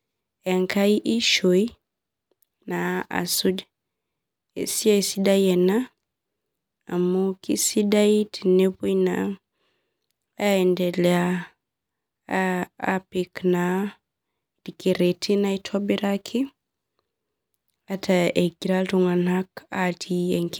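No technical faults can be heard anywhere in this speech recording. Nothing in the audio calls for a timestamp or further comment.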